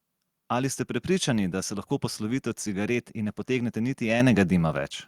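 At 4.2 s the microphone volume stepped up: the call software judged the input too quiet and raised the device's input gain in a single jump of about 8 dB. The speech and the background noise both get abruptly louder together.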